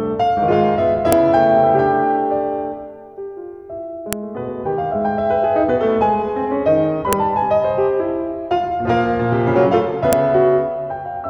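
Sharp snaps at 1.13, 4.13, 7.13 and 10.13 s, every 3 s: a file header played as audio, where stitched pieces kept their header bytes.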